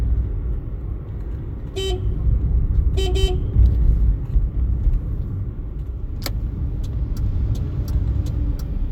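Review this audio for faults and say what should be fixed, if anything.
No faults; nothing needs fixing.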